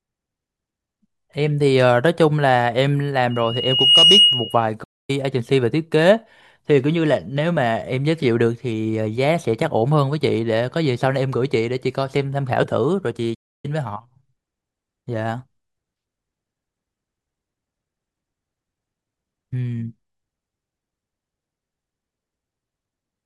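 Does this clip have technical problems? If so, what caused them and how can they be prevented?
Yes. From 3.30 to 4.68 s a piercing 2.9 kHz tone swells over roughly 0.7 s to about 10 dB above the speech: loudspeaker feedback squeal, where the microphone re-amplifies its own loudspeaker output. Lowering monitor gain, notching 2.9 kHz, or moving the microphone away prevents it.

The speech cuts to silence from 4.83 to 5.10 s (0.25 s) and from 13.34 to 13.65 s (0.29 s), likely a playback stall from an emptied buffer or blocked audio thread. A larger playback buffer and a higher-priority audio thread prevent this.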